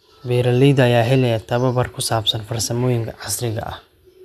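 No technical faults are audible.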